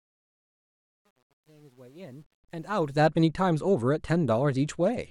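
Right from the start, the fade-in on this speech suffers truncation distortion. The level rises smoothly to full by 3.07 s, but it sounds like the gain stage keeps only about 9 bits with no dither. The quiet opening turns gritty, worst up to 2.42 s.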